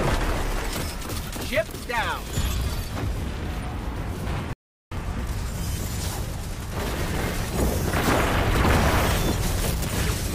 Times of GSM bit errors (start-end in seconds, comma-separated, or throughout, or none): none